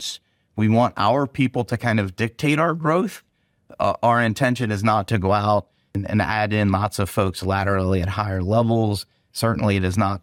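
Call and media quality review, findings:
No audible faults found.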